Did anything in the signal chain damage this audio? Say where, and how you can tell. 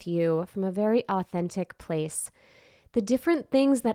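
No, nothing in the chain has damaged this speech. It has passed through Opus voice compression, which keeps the full band up to about 20.2 kHz and leaves only light coding marks.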